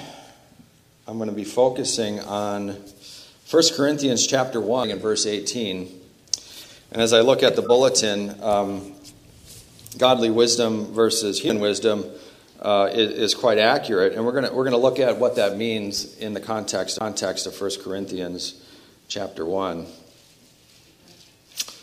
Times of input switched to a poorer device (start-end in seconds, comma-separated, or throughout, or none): none